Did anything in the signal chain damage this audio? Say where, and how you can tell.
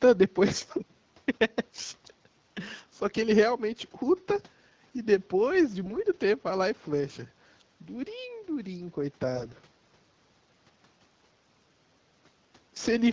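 Yes. The damage comes from AMR bit errors on the radio link feeding the AMR-WB decoder, at 5.84 to 5.99 s and more heavily at 9.36 to 9.60 s, where the error rate is around 10%. In both bursts the pitch and loudness hold steady, but the texture turns hoarse, scratchy and gargly. The checksum on the essential bits passed, so the decoder accepted these frames. Flipped excitation-pulse positions and fine gain and spectral values then drove its vocal-tract model wrongly. Packet loss sounds different: it leaves gaps or smeared concealment, not a roughened voice that keeps its pitch.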